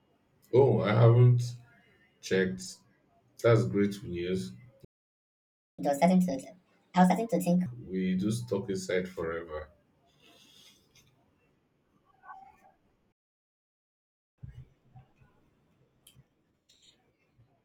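Just after "great news", at 4.85 s, the player most likely ran short of data or had its playback thread blocked. The result is a playback stall: the speech cuts out in mid-flow and leaves about 0.94 s of silence until 5.79 s. When output resumes, the backlog is drained by a catch-up at higher speed. From 5.79 to 7.66 s the player resamples to 1.5 times normal speed, so the speech rushes and its pitch jumps by roughly seven semitones. Normal pace returns before "we do stuck inside".

A second playback stall starts at 13.12 s and is likely caused by the same kind of data starvation or blocking. This one is longer, about 1.26 s of dead silence, and the sound comes back at 14.38 s.

The catch-up after it is gentler. From 14.38 to 17.38 s the speech runs at 1.1 times speed and sits about a semitone and a half sharp. That is enough to sound slightly hurried and raised before it settles back to normal.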